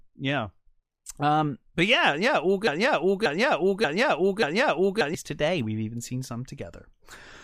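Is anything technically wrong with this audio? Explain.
Yes. From 2.67 to 5.15 s, just after "but yeah yeah all", a broken-record loop replays one 0.58 s fragment four times back to back, likely from a stalled stream resending its last fragment, so the intended audio is lost. Unlike echo, the repeats are identical and never fade.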